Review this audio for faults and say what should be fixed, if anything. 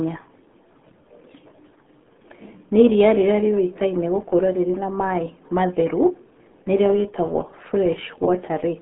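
Throughout, the speech is muffled and gargly, with a bubbling, watery texture and nothing above 3.8 kHz. The band runs from 150 Hz to 3.6 kHz. This is the RealAudio 14.4 codec damaging the signal heavily, at a rate that fits an 8 kbit/s dial-up stream. To prevent it, work from an uncompressed or high-bitrate original rather than this low-rate RealAudio copy.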